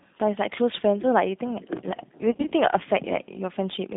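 Throughout, the speech carries G.729 codec damage: band-limited to about 150 Hz to 3.7 kHz, rough and synthetic in a way that fits 8 kbit/s G.729A coding. From 2.32 to 2.53 s, VoIP packet loss concealed by the speech codec: about 90 ms of audio is missing, in gaps of up to 20 ms spread over 200 ms. Each gap is filled by extrapolating the previous frame, which produces fading, smeared sound.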